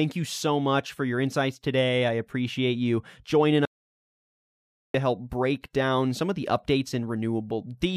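After "I appreciate you joining", an audio dropout to silence (3.65–4.94 s) cuts mid-flow to dead silence with no room tone, likely lost input.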